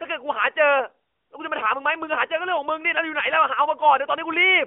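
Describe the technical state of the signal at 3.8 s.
At 3.8 s the signal is intact: no fault is present, and the speech passes through the AMR narrowband mobile codec at 12.2 kbps in the band of a 300 Hz to 3.4 kHz phone line.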